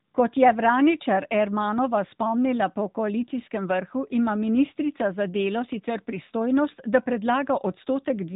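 From start to finish the speech sounds thin, boxed-in and plainly buzzy, with a synthetic edge on every voiced sound and nothing audible above about 3.8 kHz. That is the AMR narrowband mobile codec at work. The AMR-NB coder samples at 8 kHz and rebuilds the voice from a vocal-tract filter excited by a handful of pulses per 5 ms subframe. The degree of damage fits a mid-range mode of around 10 kbps.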